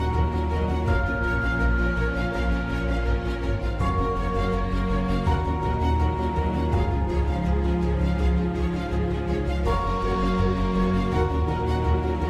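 No technical faults can be heard anywhere in the recording. There is nothing in the sound that needs a timestamp or a fix.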